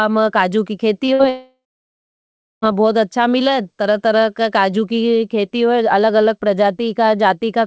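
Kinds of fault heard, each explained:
Short concealed packet loss: about 20 ms of the call reached the decoder too late, so right after "में काजु की" the receiver extended the preceding sound, leaving a brief smear near 1.06 s.
Burst of packet loss: about 60 ms in a row went missing around 1.13 to 1.21 s, so the receiver stretched and faded the last sound before the audio resumed further on.
Long network dropout: audio most likely stopped arriving for about 1.34 s from 1.29 s; a fading continuation gives way to roughly a second of silence before sound returns at 2.64 s.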